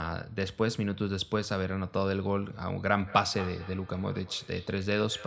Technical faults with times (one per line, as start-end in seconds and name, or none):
2.92-5.26 feedback echo between two devices